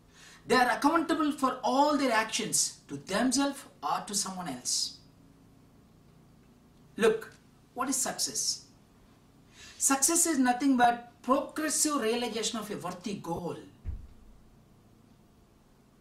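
The audio has two patches of lost LE Audio frames, a 10 ms gap at 10.84 s and a 30 ms one from 13.36 to 13.39 s. In each, the LC3 decoder filled the gap by reusing the last spectrum with random signs, so any tone smears into noise. Light lossy compression also sits underneath.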